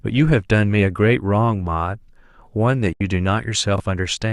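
It's a short speech clip with two separate glitches close together near the end. At 2.93 s there's a digital broadcast dropout. The receiver loses good frames and mutes, fading out in about 3 ms, then stays silent until 3.01 s. That's roughly 72 ms of programme gone, consistent with about three lost frames. Just after, from 3.76 to 3.80 s, you get chunks out of order. A 20 ms chunk turns up one slot late, so the sound jumbles briefly across the three hard joins, though nothing is actually missing.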